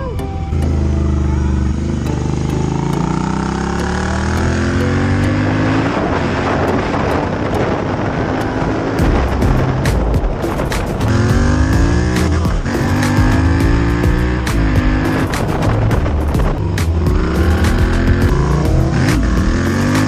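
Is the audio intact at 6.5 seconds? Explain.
Yes, the audio at 6.5 s plays through cleanly, with no dropout, click, distortion or other fault at that point.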